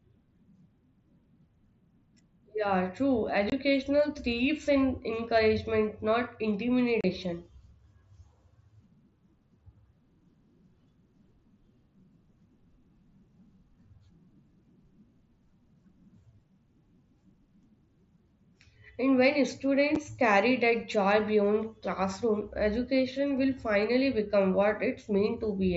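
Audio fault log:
3.50 to 3.52 s, 7.01 to 7.04 s, 19.95 s and 22.41 s, unconcealed Bluetooth headset packet loss: abrupt holes of about 22.5, 30, 7.5 and 7.5 ms with hard edges in the wideband mSBC speech. The lost audio was replaced by silence or an idle pattern rather than concealed, which fits dropped 7.5 ms headset frames.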